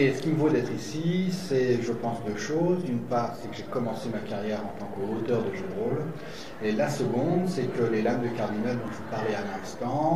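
At 1.40 s, 3.89 s and 8.88 s the sound jumps forward by a few milliseconds, with both sides butted together and no gap. The spacing points to audio missing between chunks, likely from a recorder losing a sliver at each 2.5-second chunk boundary.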